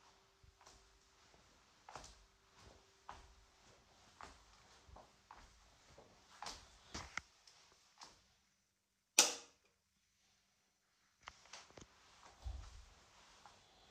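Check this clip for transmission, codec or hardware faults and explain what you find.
Two codec faults are present. Compressed frames skipped at 6.95 s and 11.31 s: each time roughly half a second of sound never plays, a run of several frames, which fits frames about 93 ms long, dropped as missing or damaged. At each join the audio jumps abruptly ahead.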